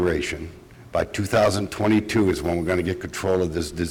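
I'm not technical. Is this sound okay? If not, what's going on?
Yes, this sound is okay, and there's nothing going on with it that needs fixing.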